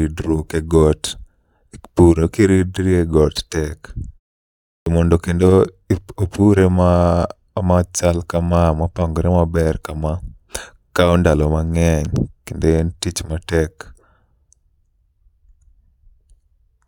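At 4.82 s, after a pause of about 0.7 s, the speech jumps in abruptly at "mondo kendo ip opure", its opening sounds missing. This is a clipped start after a pause. The output device dozed during the silence, and roughly 43 ms was swallowed while it woke.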